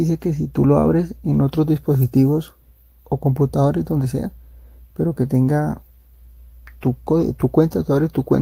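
No technical fault can be heard anywhere in the recording.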